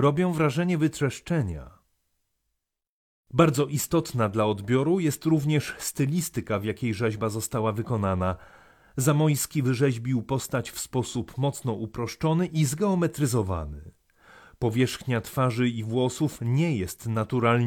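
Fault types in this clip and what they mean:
No faults turn up anywhere in this clip, so there's nothing to list here.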